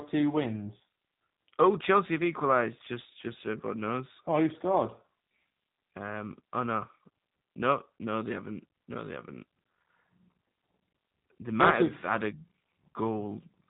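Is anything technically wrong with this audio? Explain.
Yes. Throughout the speech, G.729 codec damage is plainly audible. The codec rebuilds each 10 ms frame from a vocal tract filter, a pitch estimate and a few pulses, which fits 8 kbit/s coding. The result sounds rough and synthetic. A spectrogram shows nothing above 3.8 kHz.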